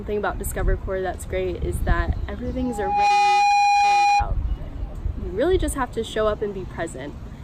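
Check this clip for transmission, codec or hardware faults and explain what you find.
One fault is present. Loudspeaker feedback squeal runs from 2.59 to 4.31 s: a microphone is picking up its own loudspeaker, and at 816 Hz the loop gain exceeds one. That tone swells over roughly half a second into a steady squeal about 10 dB above the sound.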